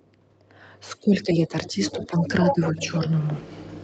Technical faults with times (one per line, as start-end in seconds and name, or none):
0.99-2.82 speech suppressed in double talk
1.85-3.00 other side's voice leaking through